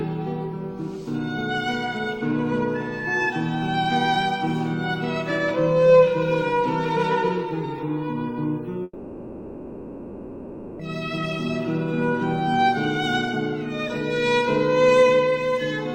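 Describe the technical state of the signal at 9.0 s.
At 9.0 s the stream is inside a long network dropout, from 8.83 to 10.82 s, likely caused by audio ceasing to arrive. The receiver fills almost the whole gap with a fading continuation of the last sound, leaving only a brief silence, and the lost two seconds never return.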